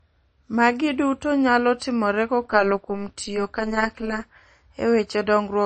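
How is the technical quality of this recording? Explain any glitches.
Quality's fairly rough: there's obvious lossy-codec damage on the speech, plus a stretch of buzz in the middle.

MP3 compression runs the whole way through: dulled treble, with watery, swirly artefacts, likely a low-bitrate MP3 around 32 kbps starving the treble and weak bands.

Overlap-add ripple hits from 2.44 to 4.22 s: frames rejoined with mismatched overlap make the level pump about 11 dB at around 200 Hz, giving a metallic buzz.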